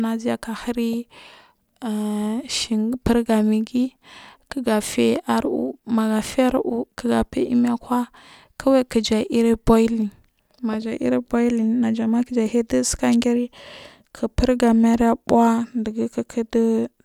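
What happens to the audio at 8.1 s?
Nothing goes wrong at 8.1 s; the speech carries on intact through that moment.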